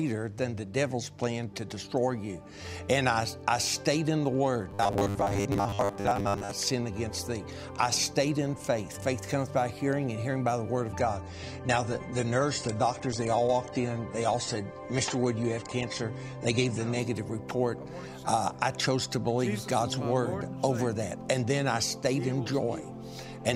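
From 4.71 to 6.51 s the audio turns into a rigid, metallic buzz at a fixed 100 Hz that only roughly follows the original, with about half of what is heard being repeats. This is robotic sound from repeated short buffers, likely caused by new audio arriving too seldom: a roughly 10 ms slice is replayed while real audio is skipped. From 10.99 to 16.99 s the quality drops suddenly and codec artefacts rise, with no gap at either edge. That is an adaptive stream at a lower bitrate, switching to a cheaper version while the connection slowed. The change in the sound fits a step down from about 96 kbit/s AAC to about 32 kbit/s before recovering.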